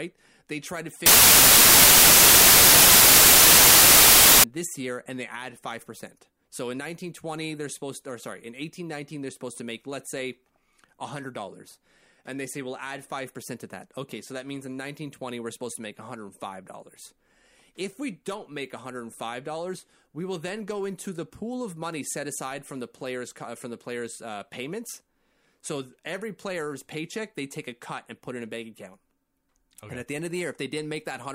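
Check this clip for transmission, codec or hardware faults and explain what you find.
The speech clip has one fault: samples built from the wrong bytes, from 1.06 to 4.44 s, between "try to" and "this year and they". The reader misassembles each sample's bytes, so the fast-changing low bits dominate and loud, harsh broadband noise is heard. A spectrogram shows a flat full-band wash; the waveform becomes a dense block.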